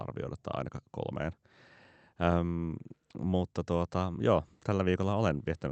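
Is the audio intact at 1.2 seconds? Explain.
Yes, the speech at 1.2 seconds is intact, with no dropout, glitch or other fault at that moment.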